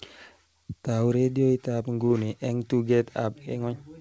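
No technical faults can be heard in the speech, which has come through a WebRTC call path working as intended, with nothing above 8 kHz, as fits a wideband G.722 codec.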